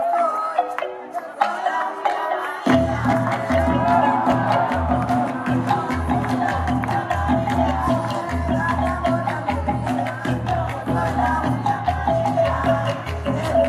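Listening to this recording of sounds, nothing technical stood out.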